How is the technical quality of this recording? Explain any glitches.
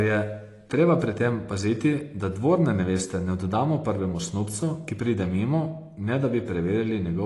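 The technical quality is poor, with plainly audible compression damage across the whole clip. Throughout the speech, nothing sounds above 11.5 kHz, and the sibilants come out smeared and fizzy with a warble. The likely cause is AAC compression: an AAC-LC encoder at a low bitrate, which fits roughly 32 kbps, discards high bands and coarsely quantises the rest. On a spectrogram, energy stops at a flat ceiling near 11.5 kHz, with patchy, blotchy gaps below it.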